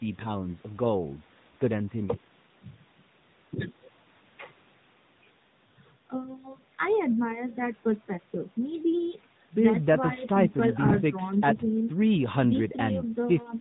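From start to finish the speech carries AMR narrowband mobile codec damage. Everything above 4 kHz is gone, and the vocal-tract model's sparse pulse excitation gives a plainly audible buzzy, synthetic edge. This fits a mid-rate mode near 10.2 kbps.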